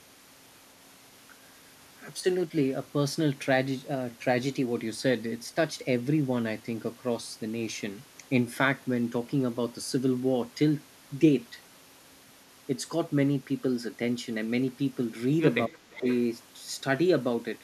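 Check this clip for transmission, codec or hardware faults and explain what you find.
Two faults are audible. Both point to a speakerphone echo canceller struggling.

Speech suppressed in double talk: at 2.2 to 2.26 s the speech dips slightly, and from 15.67 to 16.06 s it drops deeply. The canceller likely turned everything down while both sides talked at once.

Echo leak: from 15.93 to 16.19 s a faint copy of the speech returns 347 ms late, about 15 dB below it. It is likely speaker output that the canceller failed to remove.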